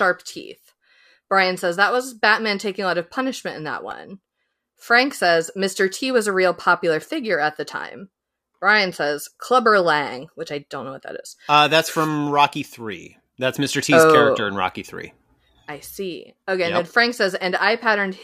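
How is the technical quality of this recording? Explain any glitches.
One glitch, at 3.91 s, is a repeated buffer. The output stream ran dry for a moment, so the playback device replayed its last block of audio instead of waiting for fresh data. Here that block lasts only 1.33 ms, which fits a 64-sample buffer, and it was played four extra times back to back. Because the piece is so short, the repeats fuse into a click or brief buzz rather than an audible stutter. Essentially no audio is lost around it.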